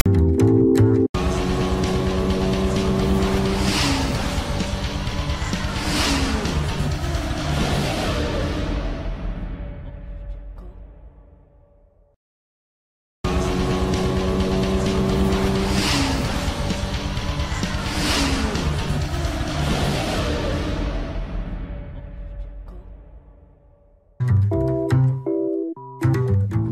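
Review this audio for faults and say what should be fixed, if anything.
From 0.00 to 0.06 s, the file tags are played as audio. A tag block at the head of the file is read as samples: the text bytes give a harsh, rasping burst pushed off-centre to one side, and the zero padding after it falls to dead silence before the real audio begins. A start-up click or a DC thump is a single transient. This one has a buzzy, textured body with hard edges on both sides and no decay.

To prevent it, have the decoder parse and skip metadata headers before handing data to playback, or strip tags from the stream first.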